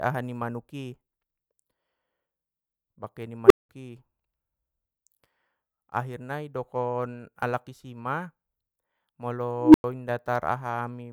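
At 3.46 s and again at 9.60 s, an unstable filter feeds back on itself. A tone of around 400 Hz, then around 300 Hz, swells to clipping in 43 ms and 139 ms, then drops to silence for 190 ms and 100 ms. On a spectrogram each shows as a bright horizontal line, and on the waveform as a flat-topped blow-up followed by a gap.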